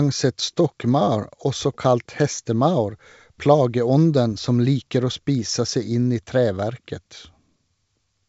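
No technical faults are audible in this speech, which comes through the G.722 wideband telephone coding path at 64 kbit/s with at most faint coding traces.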